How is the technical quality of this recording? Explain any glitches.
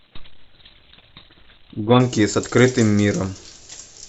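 The speech opens thin and improves partway through. From 0.0 to 2.0 s there's an adaptive stream starting at a low bitrate: nothing above about 4.3 kHz and heavier codec smearing, which fits Opus near 12 kbit/s. Once the player gauged the connection, it jumped to roughly 64 kbit/s, and the treble returned abruptly, without a gap.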